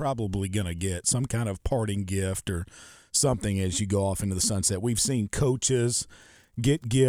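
Nothing goes wrong anywhere in this bit of speech, so there's no fault to point to at any moment in it.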